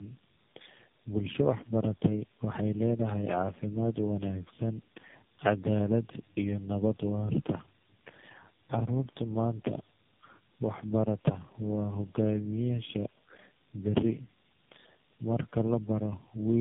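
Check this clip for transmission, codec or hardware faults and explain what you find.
One codec fault runs through the whole clip: tandem speech coding. From start to finish, the speech has passed through three narrowband speech coders in a row, which fits a chain of AMR-NB, then GSM full rate, then AMR-NB again, with plain telephone-law links between them. Each coder re-models output the previous one had already degraded, so the errors pile up. The result is rough, muffled and warbly speech with nothing above 3.7 kHz. A single low-rate codec or simple band-limiting would cut the top end just the same, but the layered, smeared warble is what sets this apart.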